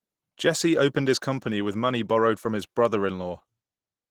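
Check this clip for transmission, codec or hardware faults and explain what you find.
One codec fault runs through the whole clip: Opus voice compression. From start to finish the speech sounds hoarse and faintly robotic, with plainly audible damage. That points to Opus in hybrid mode at a low bitrate, around 16 kbps. Below 8 kHz a linear-prediction coder models the voice and codes its excitation coarsely, in 20 ms frames, which roughens the voicing. A thin transform-coded layer carries the band above 8 kHz, so the top end is kept but sparsely.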